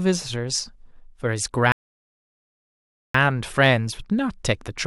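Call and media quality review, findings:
Speech drops to dead silence at 1.72 s, resumes at 3.14 s exactly where it stopped, nothing skipped. About 1.42 s added. Rebuffering stall: player buffer ran dry, playback halted until more downloaded audio arrived. Component: client buffer/network delivery.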